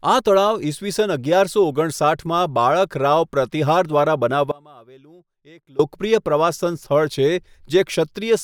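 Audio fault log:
4.52–5.79 s, audio dropout to a faint residue. Speech cuts out abruptly for 1.28 s. Only a faint leak about 25 dB down remains. The likely cause is a momentary loss of signal.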